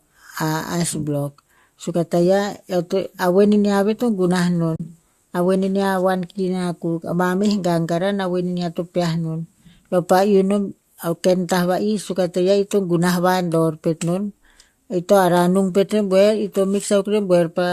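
At 4.76 s the speech drops into a brief hole lasting about 40 ms, until 4.80 s. This is AAC frame loss with muting. Lost frames were replaced with silence. The overlapping windows fade the sound out and back in, so the hole has soft edges. The light coding damage heard throughout likely comes from low-delay AAC compression.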